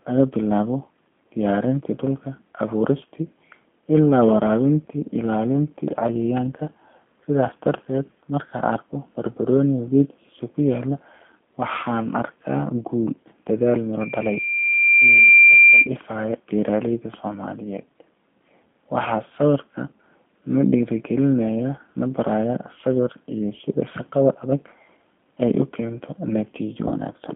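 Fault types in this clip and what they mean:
G.729 codec: The whole clip runs through an 8 kbit/s G.729A voice codec, which rebuilds the speech from a vocal tract filter, a pitch predictor and a few pulses per frame instead of sending the waveform. The line is confined to roughly 200 Hz to 3.4 kHz, so the top end is missing, and the coding damage is plainly audible as a rough, slightly synthetic texture on every phrase.
Loudspeaker feedback squeal: A microphone is picking up the loudspeaker it drives, and around 2.4 kHz the loop gain climbs above one, so that frequency feeds on itself. Starting at 14.00 s, right after "guul dadaal", a single tone swells over about a second and a half until it sits roughly 5 dB above the speech, then stops at 15.89 s.
VoIP packet loss concealed by the speech codec: At 26.88 s a single packet goes missing, leaving a gap of about 30 ms that the decoder fills by extrapolating from its last pitch and filter settings while lowering the gain. 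The result is a brief stretched, fading smear instead of silence, lasting until about 26.92 s, and because each frame builds on the one before, the speech just after it comes back weak or distorted.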